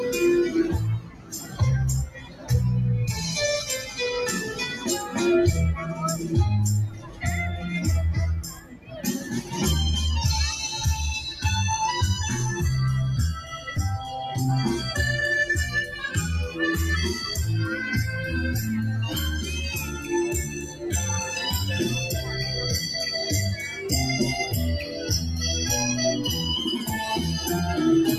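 Throughout the clip a noise suppressor applied to music or sounds is at work. It is tuned for speech and reads sustained, steady material as noise to be removed. Its gain swings by around 10 dB as it reacts, so the level pumps: onsets pass largely intact, while held portions and decays are pulled down and the texture thins. The effect persists from start to finish rather than settling.

Within that, there are eight spans of sound cut by the noise suppressor, where the attenuation goes clearly deeper than elsewhere. The first runs from 0.99 to 1.61 s and dips by about 12 dB. The next, from 2.07 to 2.5 s, also reaches about 12 dB. From 6.89 to 7.25 s the drop is about 10 dB, and from 8.42 to 9.06 s it is about 12 dB. A shorter dip from 9.22 to 9.54 s reaches about 8 dB, and another from 13.4 to 13.67 s is also about 8 dB. From 19.77 to 20.09 s the drop is about 6 dB, and the last span, from 20.43 to 20.82 s, reaches about 10 dB. 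In each case the steadier or fading content sinks audibly or has its tail truncated, while any sharp transients in the same stretch survive.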